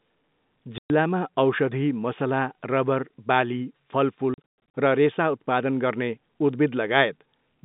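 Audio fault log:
0.78–0.90 s: packet loss filled with silence. A 120 ms hole cuts the sound dead. Its edges are hard. The length fits six 20 ms packets.
4.34 s onward: packet loss filled with silence. About 260 ms drops out in gaps scattered over 0.4 s. The longest gap is 120 ms. Each gap has hard edges.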